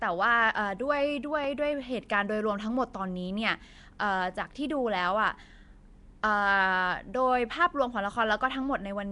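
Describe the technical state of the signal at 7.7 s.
At 7.7 s the speech carries the rough, hissy halo and smeared, underwater quality of Nellymoser compression, present throughout the clip. The likely cause is the Nellymoser Asao codec. It codes the audio in short blocks with a fixed, small bit budget. Weak bands get no bits and are filled with noise, which makes the hiss. The damage is plainly audible. Nothing is heard above 10.6 kHz, and the sound points to a rate near 44 kbps.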